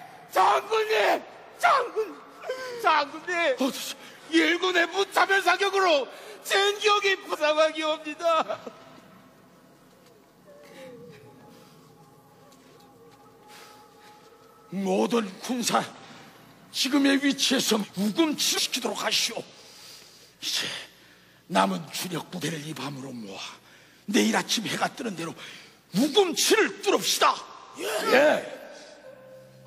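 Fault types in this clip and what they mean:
Compressed frames skipped: missing 46.4 ms frames make audio leap ahead about 0.7 s at 7.29 s and about half a second at 17.79 and 18.53 s, leaving spectrogram seams.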